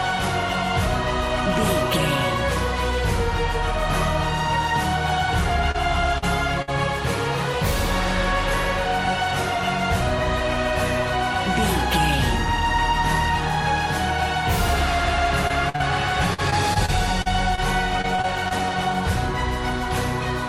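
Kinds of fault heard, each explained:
Short concealed packet loss at 5.71, 6.18, 15.47 and 15.76 s: a few packets arrived too late, so the receiver carried the preceding sound forward for 20 to 40 ms before blending back. Each one is a brief smear or wobble, and tiny fragments drop out.
Burst of packet loss at 6.62 and 15.69 s: several consecutive packets went missing, and about 50 ms of continued, fading sound covers 40 to 60 ms of lost audio. The result is a held buzz or hiss, then a jump forward past the missing part.
Repeated packet loss (robotic sound) from 16.34 to 17.60 s and 18.02 to 18.53 s: losses recur six and five times, with gaps up to 44 ms covering 13 to 17% of each span. The repeated patching makes the sound choppy.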